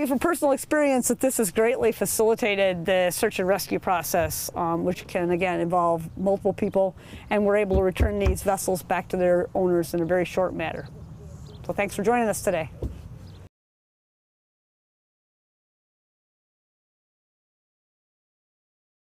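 Nothing technically wrong can be heard anywhere in the audio. No fault appears at any point, so there are no times or causes to give.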